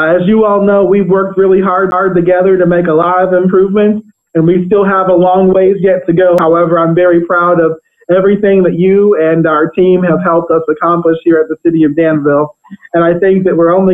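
At 1.91 s and again at 6.38 s the audio has a CD skip. The laser jumped to another turn of the disc's spiral. Each time a brief mute, roughly 10 ms and then just a few milliseconds, gives a tick, and the sound resumes from a different point.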